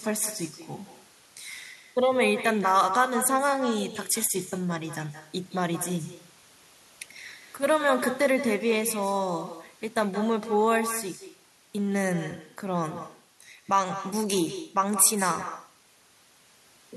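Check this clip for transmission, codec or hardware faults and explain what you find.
One fault runs through the whole clip: echo with no canceller. Every phrase returns about 150 ms later, roughly 11 dB quieter. The far end's loudspeaker feeds its microphone, and nothing strips that copy out. So the speech gets a thin shadow trailing it.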